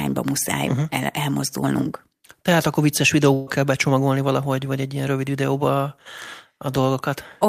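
Speech, with a burst of packet loss from 3.33 to 3.49 s. Roughly 140 ms of the signal never arrived in time for playback, and the receiver filled a gap of about 135 ms by extending the last received sound and letting it decay, so there is no drop to silence. The talker is briefly frozen into a smeared, fading tail. When the stream picks up again it jumps ahead, and the stretch in between is simply gone.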